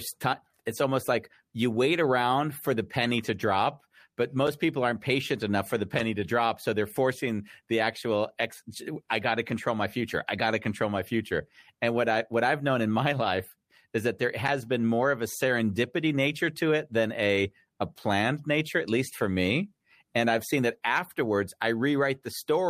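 A gap between chunks at 4.47 s, after "penny to drop but" and before "people aren't patient enough", cuts the speech with a hole of about 6.5 ms. Silence is inserted at a join between consecutive blocks of audio, so nothing is lost but the flow briefly breaks.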